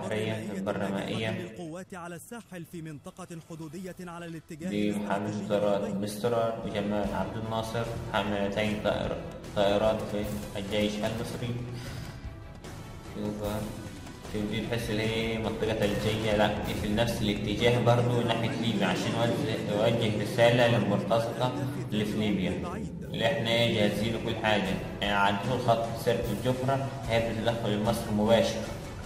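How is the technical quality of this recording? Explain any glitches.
The technical quality of this recording holds up, with no glitches to explain.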